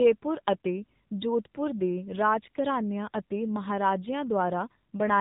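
From the first moment to the last, the speech has gone through the AMR narrowband mobile codec, the old 2G/3G phone coder. Everything above about 3.8 kHz is gone, so it sounds boxed-in and telephone-like. The coder rebuilds speech from a vocal-tract model fed by a few pulses every 5 ms, and here the damage is plainly audible: a buzzy, synthetic edge that fits one of the lower modes, around 7.4 kbps.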